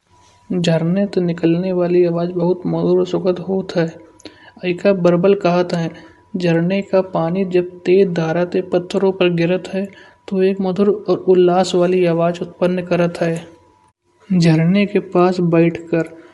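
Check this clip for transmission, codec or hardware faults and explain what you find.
One fault runs through the whole speech clip: Bluetooth LC3 compression is the likely cause of a plainly audible codec coloration. The speech carries a breathy, grainy edge. The codec cuts the signal into short frames, consistent with 10 ms, and at a rate that fits around 48 kbps it discards much of the upper spectrum and fills the gaps with shaped noise. On a spectrogram the high band looks speckled and diffuse instead of showing clean harmonic striations.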